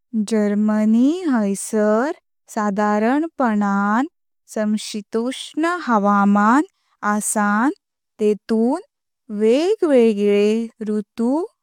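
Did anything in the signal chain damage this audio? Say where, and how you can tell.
No, nothing in this speech recording stood out as damage on listening.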